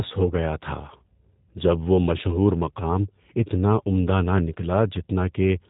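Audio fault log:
throughout, G.729 codec: the speech carries the plainly audible roughness of G.729A, whose sound fits an 8 kbit/s coder that rebuilds each 10 ms frame from a vocal tract filter, a pitch predictor and a few pulses rather than from the original waveform. Nothing survives above 4 kHz, so a spectrogram shows a hard ceiling there with blank space above, while harmonics below look smeared and grainy. The waveform keeps its overall envelope but loses fine detail.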